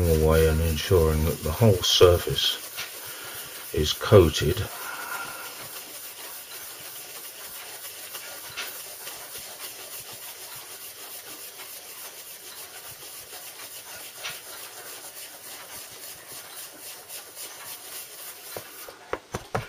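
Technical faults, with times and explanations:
No technical faults can be heard anywhere in the audio.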